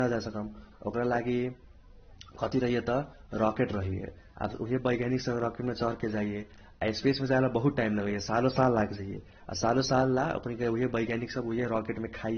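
Transcoding between lossy codecs runs through the whole clip: the speech has nothing above 6.3 kHz and carries two layers of coding damage at once. The likely cause is a low-rate AAC-LC encode, around 27 kbit/s, later re-encoded as Vorbis at a similarly low rate. The second encoder wasted bits reproducing the first one's artefacts while adding its own, and the lowest band limit in the chain stayed in place, leaving the voice dull.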